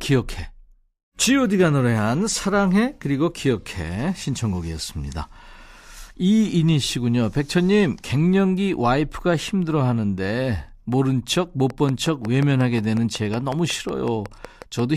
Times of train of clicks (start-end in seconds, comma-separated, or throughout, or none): 11.70-14.80